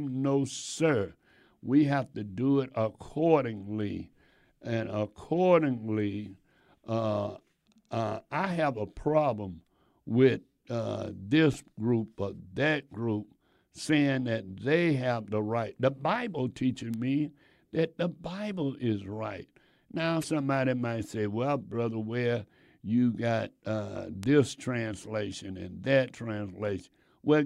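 Speech, with two kinds of digital fault. Bit error spikes cause single sharp, broadband ticks at 16.94 s and 24.23 s, the second between "you got uh" and "translation and that". Each is a flipped bit in two or three samples, jumping and snapping back. At 20.21 to 20.25 s, just before "might say well", a brief glitch likely comes from a broken MP3 bit reservoir, with missing frames leaving the next one reading foreign data.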